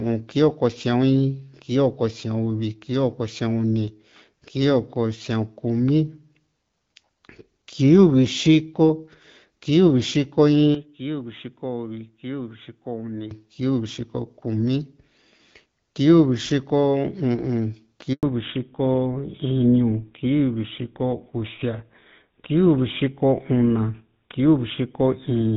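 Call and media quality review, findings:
Speech turns dull and boxy, 10.75–13.31 s. Nothing above 3.8 kHz, level about 10 dB lower, faint new background noise, no silence at the switch or return. Likely cause: input switched to a poorer device, narrower band and its own tone.

Handover gap, 18.13–18.23 s. Speech dies away abruptly, 100 ms of silence, then resumes. Network handover stalled speech frame delivery during the switch; audio spoken in that window is lost, not concealed.

Fallback to narrowband, 18.23 s to end. Speech duller and rougher than the clear HD Voice before it; nothing above 4 kHz. Fits the call dropping from AMR-WB to the older GSM full-rate codec after the handover.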